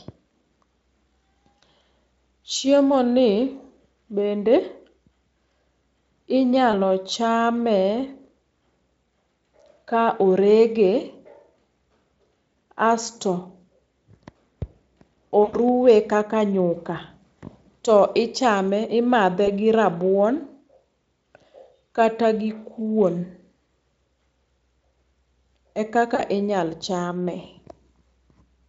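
VoIP packet loss concealed by the speech codec hits at 1.59–1.61, 6.71–6.74, 15.43–15.58, 19.45–19.48 and 26.15–26.22 s. Each time the decoder stretches the last stretch of sound into a fading buzzy tone or coloured noise, with the longest at 15.4 s, which fits about five lost 20 ms frames. The Speex coding itself sounds clean.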